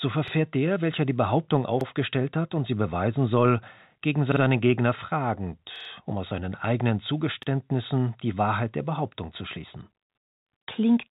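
Repeated buffer faults stutter through the speech. At 0.28 s a piece about 46 ms long plays twice. At 1.81 s it happens again, just before "hat und sie beweisen". At 4.32 s, after "sie beweisen soll gegen", the piece sounds three times. At 5.76 s it sounds four times. At 7.43 s, after "um aus seinen eigenen", it repeats once. New audio arrived late, so the device replayed its last buffer. The 46 ms length fits a 2048-sample buffer. Each repeat has a hard join. Nothing seems skipped. Through the call path, nothing sounds above 4 kHz.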